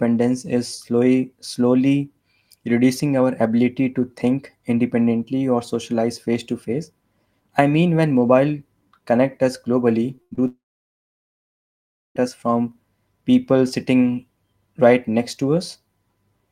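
It's a speech clip with one messy stretch of network damage. At 10.15–10.20 s and again at 10.35–10.39 s there's short concealed packet loss: about 20 ms went missing each time and got patched by stretching the last sound, so you hear a quick smear. Between those, at 10.22–10.33 s, a burst of packet loss drops about 100 ms, which comes out as the last sound held and fading. Then from 10.47 to 12.17 s the sound briefly trails off and goes silent for about 1.6 s, most likely a long network dropout, before coming back on "us from people sitting" with roughly 1.7 s of audio gone.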